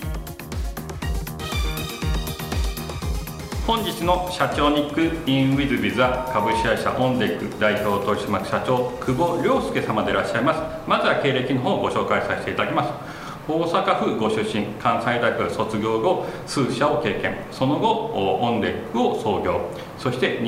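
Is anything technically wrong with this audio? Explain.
Yes. From 5.93 to 6.71 s there is a loudspeaker feedback squeal: a microphone is picking up its own loudspeaker, and at 914 Hz the loop gain exceeds one. That tone swells over about half a second into a steady squeal roughly as loud as the surrounding sound, then stops.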